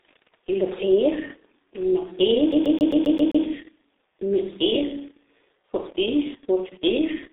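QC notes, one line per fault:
throughout G.723.1 codec: a low-rate telephony coder with 30 ms frames squeezes the speech into the 300 Hz to 3.7 kHz line band, leaving nothing above 3.8 kHz, and the heavy coding damage, which fits a rate near 6 kbit/s, makes the voice muffled and hoarse with smeared consonants.
2.52–3.45 s CD stuck on one turn: the laser jumps back to the same spot on each disc revolution, so a 132 ms slice of speech replays 7 times with a brief mute at every jump, giving a fast, even mechanical stutter.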